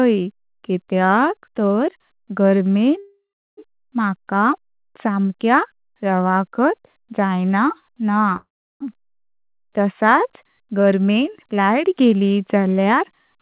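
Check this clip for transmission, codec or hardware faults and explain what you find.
Two call audio freezes interrupt the speech. From 2.98 to 3.59 s, just after "कित्याक तार गार्मेन", and from 8.36 to 8.82 s, the last sound stretches into a fading buzz and then roughly 0.35 to 0.4 s of silence. Speech resumes where it stopped, so nothing is lost, only delayed by about 0.59 s and 0.44 s. This is likely a jitter buffer running dry while packets were held up. On a spectrogram it shows as a smeared, decaying band followed by a blank gap. The waveform shows a shrinking tail followed by a flat line. Throughout the clip, nothing appears above 4 kHz, which fits a narrowband G.711 telephone codec.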